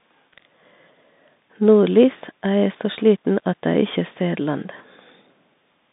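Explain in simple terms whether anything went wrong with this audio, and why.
Bluetooth CVSD headset codec damage runs through the whole clip, start to finish. The speech was squeezed through the narrow codec a Bluetooth headset uses for calls, so only sound between about 150 Hz and 3.7 kHz survives, which leaves it thin and phone-like. The codec tracks the sound in tiny up-or-down steps, and sudden loud changes outrun those steps, so s sounds turn scratchy and a grainy hiss sits underneath.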